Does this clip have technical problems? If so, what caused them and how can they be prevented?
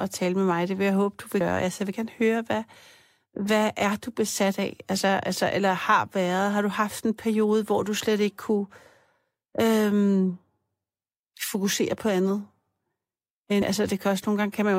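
Yes. Damaged data in a compressed stream appears at 1.40 s, just after "vil jeg håbe du", and again at 13.61 s, each a brief glitch lasting under 20 ms. Corrupted bytes made the decoder misread those frames, lose sync and skip forward to the next valid frame header. Checksummed transport and intact storage or transfer of the compressed file would prevent it.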